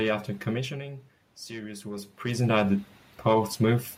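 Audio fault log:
1.47–2.64 s, automatic gain rising: just after "after commissioning" the incoming level drops about 13 dB, so the gain control creeps up about 4 dB to compensate, and you hear the voice and room noise swell together over roughly a second.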